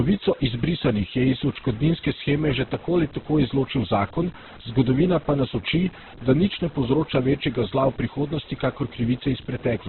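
Speech runs through the whole clip with two faults from start to finish. Quiet passages turn gritty and grainy, with error noise roughly 25 dB below the speech that rises and falls with it rather than sitting as steady hiss. That points to low bit depth without dither, likely about 6-bit truncation. Over this, the sound is heavily rough and noisy, with nothing above 4.1 kHz. It is grainy rather than swirling or hollow as MP3 would be, and fits Opus compression in its CELT mode at a very low narrowband rate of around 8 kbps as the likely cause.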